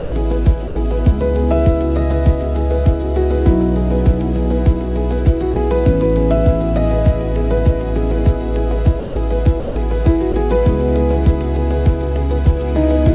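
A voice detector at the sending end likely misjudged parts of the audio as background and stopped transmitting, so the receiver filled those gaps with comfort noise. The sound gives way to steady noise at 0.00–0.12 s, 0.68–0.76 s, 5.54–5.56 s, 9.00–9.16 s, 9.60–9.76 s and 10.32–10.34 s, for between 20 and 160 ms each time, before resuming. Through the call path, nothing above 4 kHz survives, which fits a 64 kbps G.711 A-law codec.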